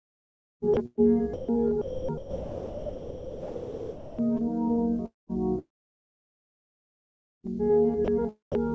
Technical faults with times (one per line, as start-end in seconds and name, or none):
0.74-1.01 sound chopped by the voice detector
1.34-1.49 sound dropped by the voice detector
1.82-4.19 sound chopped by the voice detector
5.06-5.32 long network dropout
5.59-7.55 long network dropout
8.05-8.08 sound dropped by the voice detector
8.52-8.55 sound dropped by the voice detector